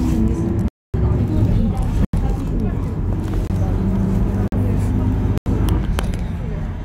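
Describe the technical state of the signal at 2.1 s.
A block of digital silence runs from 2.05 to 2.13 s: about 85 ms of samples zeroed, fitting a 4096-sample buffer left unfilled, heard as a short hole.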